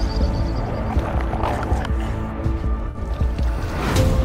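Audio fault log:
2.82–3.00 s: AAC frame loss with concealment. About 107 ms of audio goes missing in pieces across roughly 170 ms. The longest gap is around 70 ms. The decoder fills each gap from the last good spectrum, so the sound turns briefly smeared, noisy and phasey.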